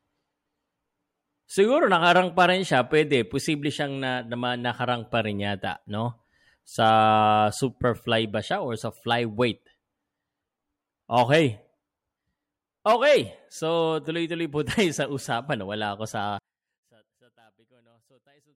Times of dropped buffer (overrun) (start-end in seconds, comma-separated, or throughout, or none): none